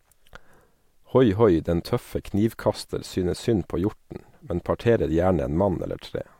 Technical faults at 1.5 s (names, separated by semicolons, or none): none